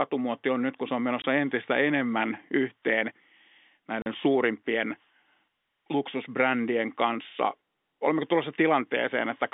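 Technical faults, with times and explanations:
1.22 s and 4.02–4.06 s, packet loss filled with silence: the speech drops out twice. The first hole is right after "nyt kun se on" and before "entistä enemmän yhteen", and the second is a 40 ms gap. Those lengths fit one and then two lost 20 ms packets, with the receiver playing plain silence in their place. The waveform is cut off and restarted abruptly, so each hole has hard edges as well as going quiet.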